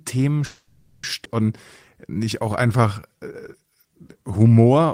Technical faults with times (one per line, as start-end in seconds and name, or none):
0.45-1.04 call audio freeze
1.24-1.26 skip ahead
1.94-4.86 jitter buffer slow-down